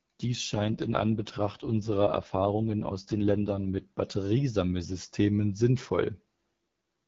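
AMR rate drops at 0.53 to 3.84 s and from 6.53 s onward lower the codec's bitrate, so the speech turns rough and raspy with no gap.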